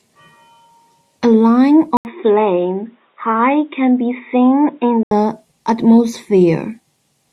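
A speech recording in which the input was likely switched to a poorer device at 1.97 s, with the original path restored at 5.11 s. The changeover opens with a gap of about 80 ms. From there the band stops near 3.8 kHz, so the speech turns dull and boxy, drops to a few decibels quieter, and sits over a new noise floor well below the signal. At 5.11 s the full, brighter sound returns abruptly.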